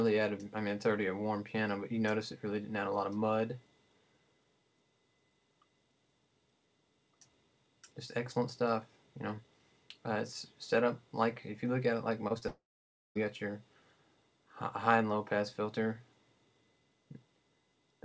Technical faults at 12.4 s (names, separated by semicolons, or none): short concealed packet loss; long network dropout